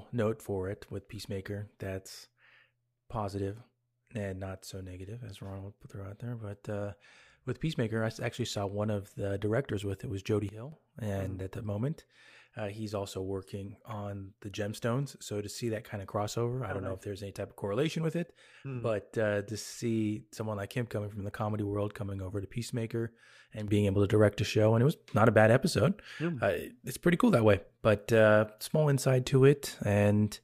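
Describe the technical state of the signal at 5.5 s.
At 5.5 s the speech signal is intact, with no dropout, clipping, glitch or other fault to be heard at that moment.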